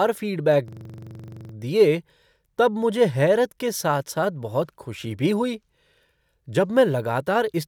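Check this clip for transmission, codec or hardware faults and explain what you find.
One fault stands out, a system hang loop in the speech from 0.68 s to 1.54 s, just before "दिए तब मुझे हैरत". It sounds like a rapid, rattling stutter close to a coarse buzz: a single 42.7 ms fragment repeats exactly about 20 times at 23.4 Hz. The system most likely stalled while the audio hardware kept replaying the same ring buffer, which fits a 2048-sample buffer. When playback resumes, little or no audio seems to be missing.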